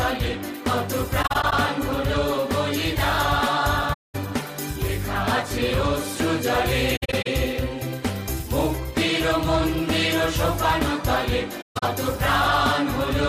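AAC frame loss with muting cuts the sound four times: 1.22–1.53 s, 3.93–4.15 s, 6.96–7.27 s and 11.61–11.83 s. The decoder zeroed the missing frames, and the overlapping windows fade the audio out and back in, leaving soft-edged gaps. The second gap is one solid 213 ms hole. The others are clusters of shorter dropouts, the last including a run of about 150 ms. A spectrogram shows full-band blank columns with tapered edges, and the waveform narrows smoothly to zero.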